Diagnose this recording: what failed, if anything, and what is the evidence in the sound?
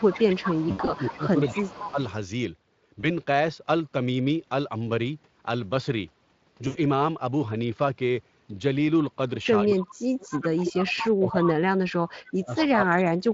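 Call processing, speech suppressed in double talk: from 0.0 to 1.99 s the level sags by about 15 dB over roughly a second and a half, and from 9.62 s to the end it drops by up to about 40 dB across roughly three seconds. The likely cause is the echo canceller attenuating the near talker while the far side was active.

Call processing, echo leak: a fainter copy of the sound trails by 233 ms, about 10 to 15 dB below the direct signal, from 0.14 to 2.13 s, 9.70 to 10.38 s, 11.04 to 11.48 s and 12.57 to 12.64 s. This likely comes from loudspeaker pickup that the canceller failed to remove completely.

Network, VoIP packet loss concealed by the speech codec: there are gaps at 0.71 to 0.90 s (100 ms missing across 160 ms, longest run 80 ms), 3.01 to 3.06 s (20 ms), and 6.67 to 6.77 s (80 ms). In each, the decoder extends the last pitch and filter into a fading buzzy tone or coloured noise, and the speech stays weak briefly afterward. 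The light Speex coloration elsewhere comes from coding at 23.8 kbps.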